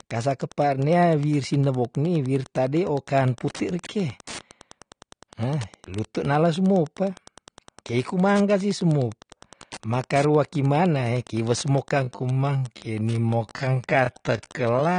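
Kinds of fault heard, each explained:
Wi-Fi interference: A nearby Wi-Fi radio's transmissions are being picked up and rectified by the audio circuitry, so its activity becomes audible. Throughout the clip there is a steady ticking about ten times a second, matching the 102.4 ms beacon interval, sitting roughly 25 dB below the speech.
AAC compression: The speech was likely encoded with AAC-LC at a low bitrate. To save data, the encoder quantises its frequency lines coarsely and discards the top of the spectrum, at a rate around 32 kbps. The damage is plainly audible throughout: the speech sounds dull and smeared, and sustained sounds and sibilants take on a warbling, fizzy texture where bands were thinned or patched.
Time-stretched section: From 11.99 s to the end, just after "makarua kimanae kiwe", part of the audio was likely stretched to fill a longer slot, with the pitch held by repeating short slices. 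The section plays at about 0.6 times its original speed, so the pace abruptly drags while the pitch stays the same.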